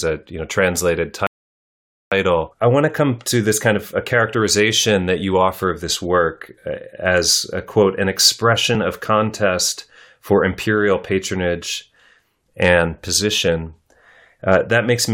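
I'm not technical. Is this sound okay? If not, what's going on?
No. Near the start there is a rebuffering stall: the player used up the audio it had downloaded and had to wait for more. After "a you know translated", the speech stops dead from 1.27 to 2.12 seconds, then carries on with "I want" exactly where it left off. Nothing is missing. The pause just adds about 0.85 seconds of silence that was never in the original.

Later there are two short bursts of hard clipping. The loudest moments of the speech were too strong for part of the audio chain to handle, so the tops of those sound waves got sliced flat. That flattening adds a rough, crackly edge. You can hear it from 12.62 to 12.78 seconds and again from 14.49 to 14.56 seconds, as brief harshness on the loudest sounds.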